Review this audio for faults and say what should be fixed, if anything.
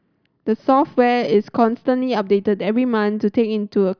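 Nothing should be fixed, as no faults turn up in this audio.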